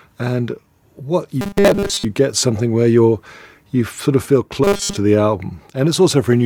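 Audio likely arrived too seldom from 1.41 to 2.05 s and again from 4.64 to 4.97 s, so 5 ms buffers were repeated over most of the sound, giving robotic sound from repeated short buffers: a rigid, metallic 200 Hz buzz loosely tracking the speech.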